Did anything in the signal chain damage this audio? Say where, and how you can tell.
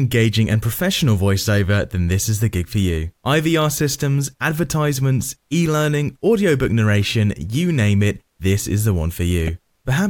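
Yes. At 9.47 s there is a brief blip, the mark of damaged data in a compressed stream, so the fault lies at the codec stage or in the stored or transmitted file it reads from. A run of corrupted bytes makes the decoder misread the affected frame and lose sync until it finds the next valid frame header. On a spectrogram this appears as a thin vertical smear of broadband or oddly banded energy, and the waveform shows a short discontinuous glitch.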